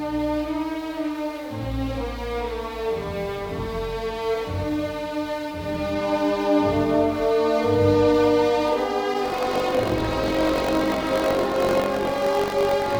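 From 9.24 s to the end, buffer tearing: the writer and hardware reader have slipped, splicing stale audio into every period, producing a rattling 46.9 Hz buzz.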